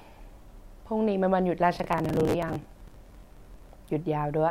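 Processor overload crackle runs from 1.75 s to 3.73 s. Over those two seconds the processor repeatedly fails to deliver its small audio buffers on time, which points to blocks of around 10 ms, with dozens of deadlines missed in quick succession. Each late block is filled by replaying a scrap of earlier audio with abrupt edges, so the speech is overlaid with a dense, gritty crackle and tearing that clears once the load eases.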